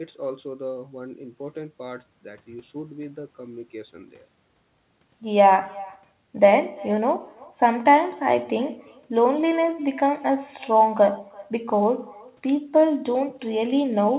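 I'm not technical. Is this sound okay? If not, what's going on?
No. Throughout the clip, every bit of speech is followed about a third of a second later by a faint, thinner copy of itself. This is echo with no canceller: the far end of the call is playing the sound through a loudspeaker, its microphone picks it up again, and nothing on that side removes it. So the talker's own speech travels back down the line, trailing just behind the original and blurring it.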